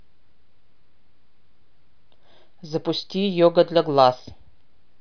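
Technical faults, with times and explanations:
No technical faults are audible in the speech, which holds steady level and continuity with no breaks or disturbances in the signal.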